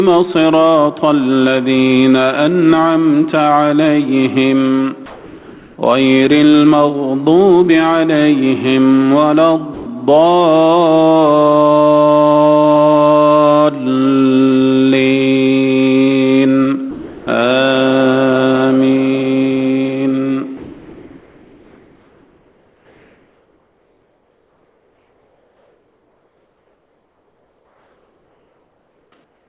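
Sound dropped by the voice detector occurs at 5.06 to 5.78 s, 9.74 to 9.86 s and 16.91 to 17.27 s. Each time, the sound cuts out and steady noise or near silence fills the gap until the signal resumes. The first gap lasts 720 ms, about 580 ms of it in place of real sound. The others last 120 ms and 360 ms. The likely cause is a sender-side voice detector that judged this sound to be background, stopped transmitting, and let the receiver substitute comfort noise.

Comfort noise in place of the background runs from 20.57 to 29.12 s, then again from 29.24 s to the end. In these stretches, the real background, sitting about 44 to 45 dB below the loudest parts, gives way to smooth synthetic noise with no texture. It is about 1 dB quieter in the long stretch and about 4 dB quieter at the close. This is likely discontinuous transmission, with the receiver shaping noise to match the background from occasional updates. 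Throughout, nothing is heard above 4 kHz, which fits a G.711 A-law call path at 64 kbps.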